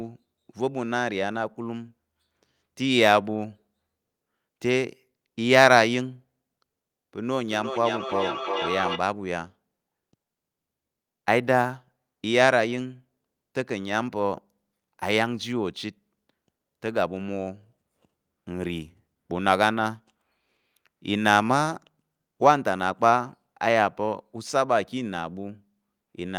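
Feedback echo between two devices appears from 7.48 to 9.1 s: a second device in the room replays the speech, its microphone picks it up again, and the echo canceller can't remove sound it didn't play, so the speech returns roughly every 0.4 s, peaking at about 7 dB below the speech.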